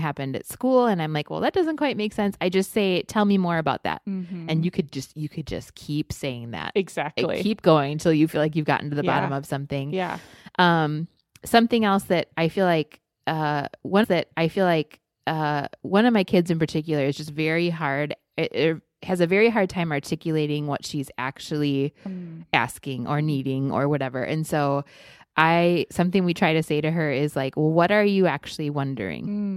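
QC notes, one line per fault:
14.03 to 16.02 s, stream segment repeated: about 2.0 s of the speech plays a second time, preceded by a small blip where playback jumps back to the start of the chunk it has just delivered. The player fetched or queued the same segment twice, so the passage is added rather than lost. Unlike a buffering stall there is no gap or silence, and unlike an echo the repeat comes once, whole and at full level, not as a faded overlay.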